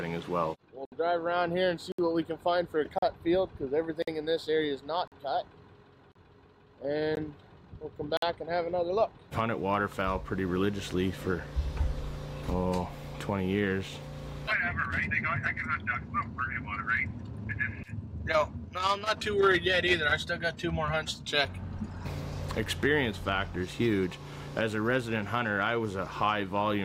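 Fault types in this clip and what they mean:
gap between stream segments: Brief, hard-edged dropouts to silence, 17 to 66 ms long, cut into the sound about once a second from 0.85 s to 8.17 s. Consecutive 1 s segments have timestamps that don't quite meet, so the player pads each gap with silence without losing audio.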